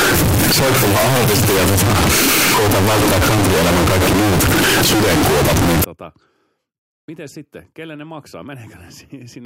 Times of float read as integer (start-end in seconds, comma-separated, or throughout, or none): 0.00-5.84